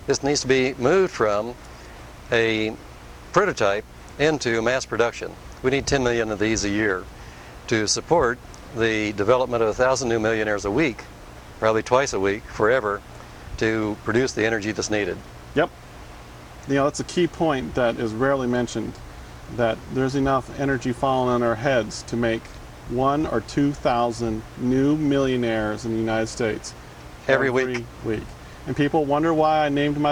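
A video or display buzz runs throughout: a screen or video cable couples into the audio path, producing a 60 Hz field-rate buzz with hash above it, roughly 25 dB below the sound.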